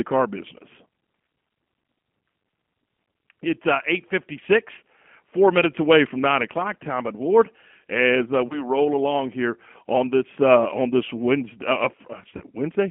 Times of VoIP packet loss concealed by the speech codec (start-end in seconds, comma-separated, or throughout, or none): 8.47-8.65, 12.37-12.45